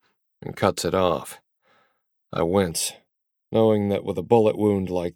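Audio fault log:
2.71 s to the end: channel delay (comb filtering). One side starts running a fraction of a millisecond late, and once both are folded to mono the shared content cancels at evenly spaced frequencies from around 1.5 kHz up, so the sound turns hollow and phasey.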